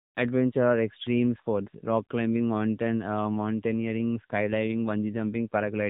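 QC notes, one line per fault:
Throughout: AMR narrowband mobile codec. The speech sounds thin, boxed-in and distinctly buzzy, with a synthetic edge to it. Nothing survives above about 3.8 kHz, so sibilants lose their hiss. That is the sound of a phone-call codec that rebuilds the voice from a coarse vocal-tract model and a handful of excitation pulses per short frame. The damage is plainly audible here, which fits its 7.95 kbps mode.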